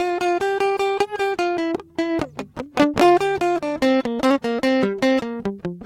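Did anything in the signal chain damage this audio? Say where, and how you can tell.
Yes. The music carries small, unevenly spaced hiccups and a faintly unsteady tempo throughout. This is clock drift between sender and receiver at the network buffer stage: the sender's clock runs roughly 5 percent fast, so the receiver's jitter buffer keeps overfilling.

Those hiccups are repeated timing corrections, running from about 0.02 s to 5.74 s. To stay in step, the receiver keeps trimming short pieces, always in the same direction, which plays the material at about 105 percent speed.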